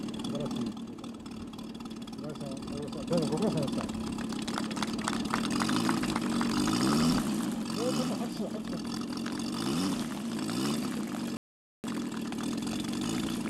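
At 0.71 s the level drops abruptly by about 6 dB and stays down until 3.11 s, then comes back. The same thing happens again at 7.63 s, and this time it never recovers before the end. That kind of clean 6 dB step is what you'd get if one channel drops out, likely one side of the stereo pair going dead, so the mono sum keeps only half of the shared material. Anything that lived only on that side just vanishes.

Inside that second dip there's a rebuffering stall. At 11.37 s everything cuts to dead silence, and at 11.84 s it picks up exactly where it left off. The player ran dry of downloaded audio and waited for more to arrive. Nothing is skipped; you just get about 0.47 s of extra gap inserted into the timeline, which makes the sound feel like it hiccuped and then carried on.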